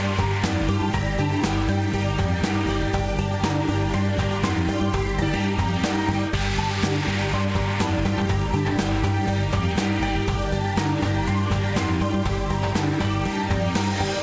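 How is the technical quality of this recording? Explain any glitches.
The recording has one clear glitch, a skip ahead at 5.22 s. It passes through a wideband call path, with nothing above 8 kHz, consistent with a codec such as G.722 at 64 kbps. At the skip, roughly 0.7 s of sound was discarded, either in transit or by the jitter buffer flushing when it overflowed with later audio already queued. No silence or concealment fills the gap. The material on either side is butted together, so the sound lurches abruptly forward.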